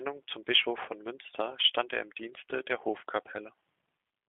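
Speech, passed throughout the clip through the G.729 codec. The band runs from about 300 Hz to 3.5 kHz, and a plainly audible rough, synthetic edge comes from rebuilding each frame from pulses, which fits an 8 kbit/s link. Simple telephone band-limiting would narrow the sound without that buzzy coarseness.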